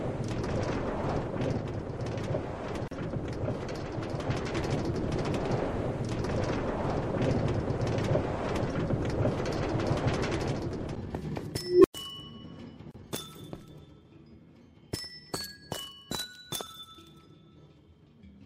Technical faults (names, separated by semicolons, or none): gap at a join of encoded pieces; unstable filter